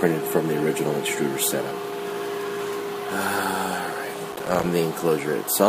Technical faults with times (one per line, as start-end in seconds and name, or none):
4.33-4.65 processor overload crackle